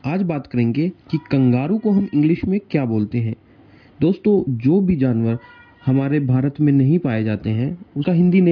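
No technical faults can be heard anywhere in this audio; the signal holds steady and intact for its whole duration.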